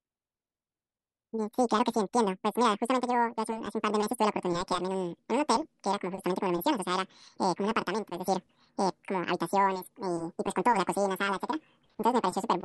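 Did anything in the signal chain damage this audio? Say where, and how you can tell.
Yes. The damage is at sample-format conversion: this audio was read two samples at a time (double speed), with each pair of samples treated as a single frame, as if the data held two channels or samples twice as wide. Throughout the clip, the speech runs at 2x speed and sits a full octave, 12 semitones, above its natural pitch. Because every other sample is effectively skipped, any content above a quarter of the sample rate folds back.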